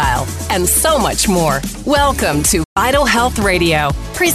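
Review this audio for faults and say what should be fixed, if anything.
A digital broadcast dropout runs from 2.63 s to 2.77 s. The sound fades out over about 8 ms and goes silent. It returns later in the programme. Roughly 120 ms of audio is missing, which fits around five lost frames. The receiver lost the signal or got frames that failed their checksum. It muted until good frames arrived. That material is gone. Stronger reception or more robust error protection on the transmission would prevent it.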